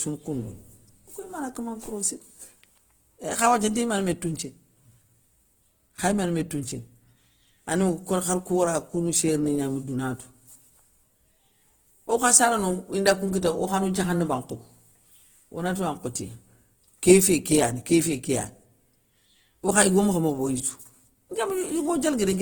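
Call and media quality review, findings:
Opus compression, whole clip: speech grainy and rough, tonal parts turned noisy, little swirl and few spectral holes, bandwidth held to about 20.1 kHz. Likely CELT-mode Opus starved of bits, filling bands with folded or noise content. Damage fits roughly 16 kbps.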